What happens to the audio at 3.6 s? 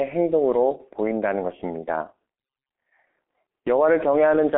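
At 3.6 s you're hearing the same G.723.1 codec damage that runs through the whole clip. The speech sits in a narrow 250 Hz to 3.4 kHz band with nothing above 3.8 kHz, and the slow, coarse frame-by-frame voice model, consistent with a bitrate around 6 kbit/s, leaves it muffled and hoarse with smeared consonants.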